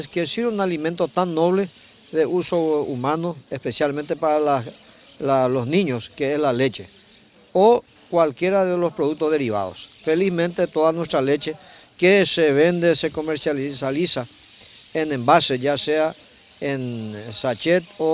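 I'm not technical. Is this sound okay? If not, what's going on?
Yes, no technical faults heard.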